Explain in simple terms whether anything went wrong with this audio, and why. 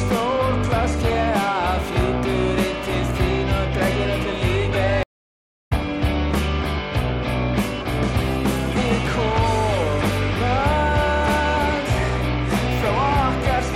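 At 5.03 s the sound cuts out for about 0.6 s and comes back roughly half a second further along: a stream reconnect, where the connection dropped and playback restarted.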